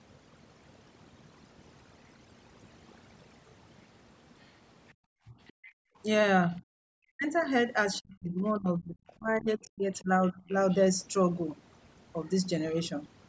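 Overdone noise removal runs through the whole of this speech recording: the noise reduction was set so strong that individual frequency bands sitting near its noise estimate are pulled down or switched off, and the quieter parts of the voice vanish with them. The background drops and breaks up into twinkling specks, and the voice's top ends at 8 kHz from the call's normal microphone band limit. Other side's voice leaking through appears from 4.41 to 6.53 s, briefly at 7.93 to 7.97 s, and again from 9.93 to 10.77 s: a second voice can be heard far down, around 30 dB below the main speech. The likely cause is a far-end talker playing over a loudspeaker that the echo canceller failed to scrub fully from the microphone, so leftover scraps slip through. Background gated by the echo canceller occurs between 4.94 and 5.96 s, where the room sound drops by as much as about 40 dB for roughly a third of a second in total, as the canceller clamps the microphone while the loudspeaker is active and then releases it. 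Speech suppressed in double talk is heard as a short dip of roughly 10 dB lasting about 50 ms at 5.28 to 5.33 s, and as a much heavier stretch from 6.6 to 10.49 s, where the talker's voice drops by up to roughly 40 dB and breaks up for around two seconds in total. Both overlap the leaked second voice, so the likely cause is the canceller being unable to tell its own talker from the loudspeaker echo during simultaneous talk and turning everything down.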